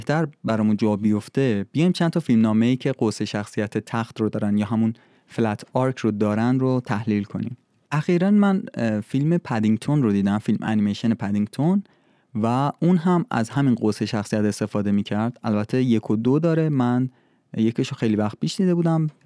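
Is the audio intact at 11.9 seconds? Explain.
Yes, the audio is intact at 11.9 seconds, with the speech continuing cleanly through that moment and no audible fault.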